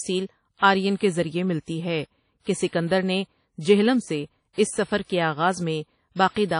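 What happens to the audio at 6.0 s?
At 6.0 s you're hearing the same damage that runs through the whole clip: the speech has that ringing, washy quality with a hiss that swells and fades along with the voice, and nothing survives above about 10.1 kHz. That's most likely WMA compression at a low rate, something like 32 kbps. The transform encoder smears its quantisation noise over long blocks of tens of milliseconds and throws away weaker spectral detail entirely.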